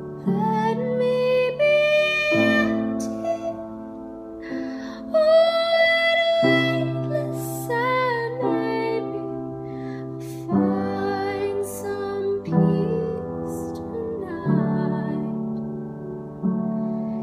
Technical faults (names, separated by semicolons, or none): none